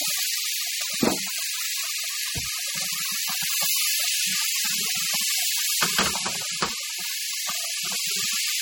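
MP3 compression throughout: the treble cut off and a plainly audible watery swirl, likely from an encoder short of bits, fitting a bitrate near 32 kbps.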